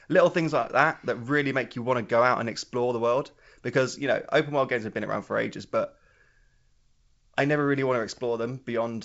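No technical faults are audible anywhere in the speech.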